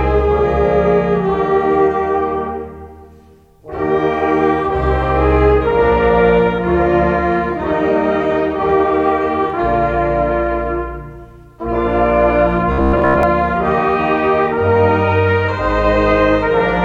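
Around 12.72 to 13.23 s, so for about half a second, the audio collapses into robotic sound from repeated short buffers, a hard metallic buzz pitched at 66.7 Hz. That pitch points to a chunk of roughly 15 ms being looped. The likely cause is new data arriving too slowly, so playback keeps refilling the gap with the last snippet. For most of that stretch you're hearing repeats instead of fresh material, and the real audio in between is simply skipped.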